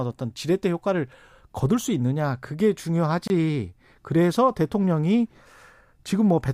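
Separately encoded pieces of this speech clip were joined without trimming the encoder's start-up delay and end padding, leaving a gap at a join of encoded pieces: a 25 ms silence from 3.28 to 3.30 s with smeared edges, after which the speech resumes where it stopped.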